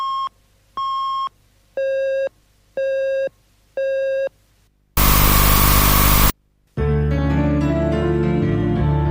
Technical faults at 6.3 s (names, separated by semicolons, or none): float read as integer